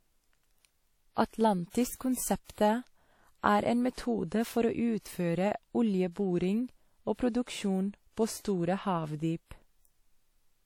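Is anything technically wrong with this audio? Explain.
Yes. Throughout the speech there is plainly audible damage, likely from WMA compression at a rate that fits about 48 kbps: long transform blocks smear quantisation noise into a ringing, washy hiss that breathes with the voice. Nothing sounds above 18.5 kHz, and this signal-following hiss distinguishes it from steady background noise.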